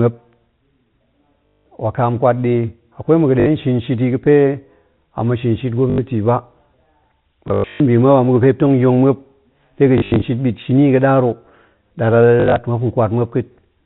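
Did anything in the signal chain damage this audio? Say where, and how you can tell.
Yes. Packet loss with last packet repeated, at the network stage: 1.46–1.66 s before "wakam kwat", 3.40–3.46 s before "shin shit i ga̱", 5.90–5.98, 7.48–7.80, 9.98–10.22 s after "muop de ga̱n", and 12.40–12.56 s. Missing packets were filled by replaying the last one. Its joins fall out of step with the pitch, giving a robotic stutter buzzing near 50 Hz, which fits 20 ms packets.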